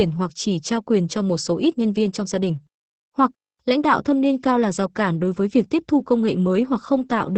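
All the way through, the speech carries Opus voice compression. Nothing survives above about 8.6 kHz, and the coarse linear-prediction coding leaves the voice muffled, hoarse and a bit robotic, which points to a wideband SILK setting starved at roughly 10 kbps.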